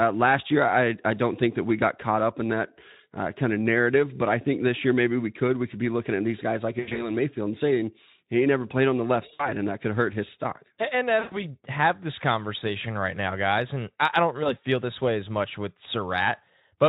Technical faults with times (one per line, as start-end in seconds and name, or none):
6.79-7.12 VoIP packet loss concealed by the speech codec
9.33-9.50 VoIP packet loss concealed by the speech codec
11.19-11.40 VoIP packet loss concealed by the speech codec
14.43-14.57 VoIP packet loss concealed by the speech codec